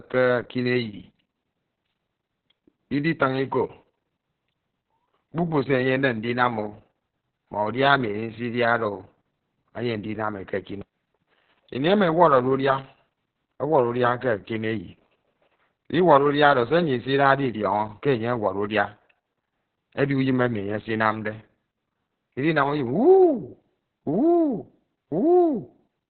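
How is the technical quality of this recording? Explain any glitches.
Technical quality is poor because of one fault that runs through the whole recording.

Heavy Opus voice compression is present from start to finish. The SILK coder has cut the band to narrowband, leaving nothing above about 4.3 kHz, and codes the excitation coarsely, which fits a bitrate near 6 kbps. The speech sounds muffled, hoarse and slightly robotic. A spectrogram shows a flat ceiling near 4.3 kHz with nothing above it.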